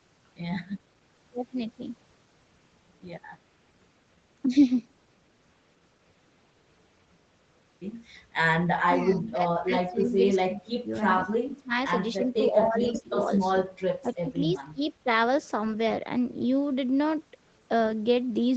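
From 8.85 to 14.88 s the speech repeatedly sinks or breaks into fragments, at 8.85, 9.65, 10.42, 11.46, 12.16, 14.02 and 14.59 s, dropping by roughly 15 to 25 dB. This is likely speech suppressed in double talk: with both sides talking, the echo canceller mistook this talker for loudspeaker echo and turned the speech down.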